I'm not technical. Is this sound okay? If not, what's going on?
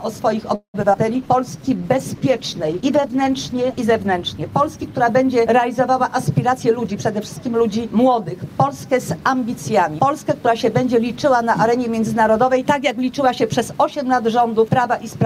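No. Repeated packet loss (robotic sound) from 0.55 to 1.0 s: four chunks of sound went missing, the longest nearly a fifth of a second, and were patched over, giving a choppy effect with pieces missing.

Call bitrate drop from 1.1 to 6.8 s: the connection allowed far less data, so the sound was squeezed harder and comes out rougher and duller until it recovers.

Jitter buffer slow-down from 1.26 to 1.85 s: the receiving end ran short of stored sound and stretched what it had, so this stretch plays at about 90% speed.

Jitter buffer speed-up from 6.52 to 8.47 s: too much sound had piled up, so tiny slices were trimmed out, about a fifth of a second in total, and the audio runs slightly hurried.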